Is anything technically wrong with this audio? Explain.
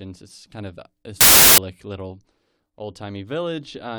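Yes. From 1.21 to 1.58 s, after "it's kind of this", an uninitialised buffer plays leftover memory as samples. It's a 0.37 s digital noise burst, which fits a 16384-sample buffer, before "little old".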